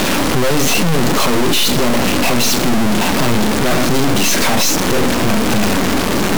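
Speech, but you'd barely know it: the whole clip is an integer read as float fault, 32-bit integer samples decoded as 32-bit float. Values land near zero or way past full scale, so it's a brutal clipped square-wave buzz that drops to silence wherever the speech gets quiet.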